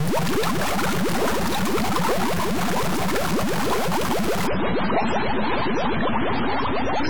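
From the start of the clip to its end, a distortion rides on the sound, and quiet passages fill with a noise floor instead of falling silent. This points to a stuck bit, likely a data line or converter bit held at a fixed value. On the waveform, samples jump by a constant step in a pattern that follows the signal's shape. The spectrogram shows broadband grit spread across all frequencies.

At 4.47 s the quality drops suddenly without any gap, and it stays degraded to the end. This is an adaptive stream switching to a lower-bitrate version. The treble vanishes, and swirly, watery codec artefacts appear, consistent with a fall from around 128 to 16 kbit/s MP3. On a spectrogram the energy is cut off cleanly at 7.7 kHz from that point onward.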